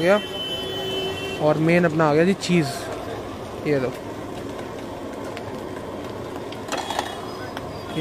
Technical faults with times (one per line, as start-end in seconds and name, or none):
none